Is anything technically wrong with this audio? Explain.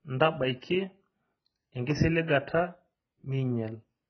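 Yes, the speech carries heavy AAC compression damage throughout. Nothing comes through above 6.1 kHz, so it sounds dull, with smeared, warbly sibilants. That's likely low-bitrate AAC-LC, around 12 kbps, dropping high bands and coarsely quantising the rest.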